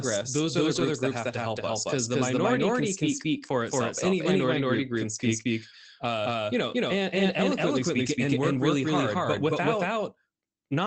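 Throughout the clip, every stretch of speech is followed by an exact second copy at about the same loudness, trailing by roughly a fifth of a second. The copy is dry and full-band, with no room colour or decay, so it sounds like a hard slapback rather than an echo. This is a doubled audio track, most likely the same signal captured twice, once through a slower path that lags behind the first.

From 0.75 to 0.81 s, about 40 ms of the sound turns briefly rougher and grainier without any dropout, which fits two separate lost packets. At 5.15 s a shorter patch of about 20 ms has the same texture, pointing to a single loss. In both places a lost packet was rebuilt from error correction: the following packet carried a low-bitrate backup copy, and the decoder played that coarser version to cover the gap. The Opus call path, running at 24 kbps with content up to 8 kHz, carries its ordinary coding noise around these spots.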